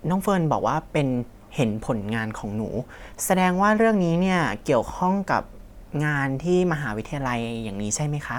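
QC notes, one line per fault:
Nothing stood out on listening to this speech recording.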